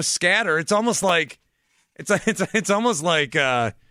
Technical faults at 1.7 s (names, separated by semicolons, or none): processor overload crackle